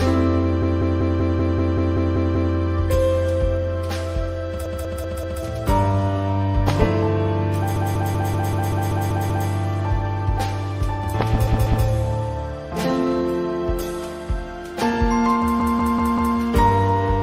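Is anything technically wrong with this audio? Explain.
Yes. Repeated frames occur at 0.62–2.54, 4.66–5.42, 7.76–9.49, 11.47–11.86 and 15.60–16.37 s. Each time, a 192 ms block of compressed audio is decoded again, 2 to 10 extra times. This makes a looping stutter, and it lengthens the audio.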